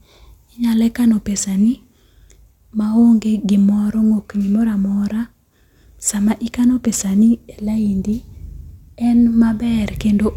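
No audible technical faults.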